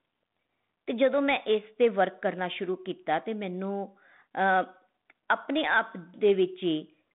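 No technical faults can be heard in the speech, which comes through a G.726 ADPCM telephone path at 32 kbit/s that confines it to a line band of about 150 Hz to 3.6 kHz, with nothing above 3.8 kHz and only the light graininess that coder leaves.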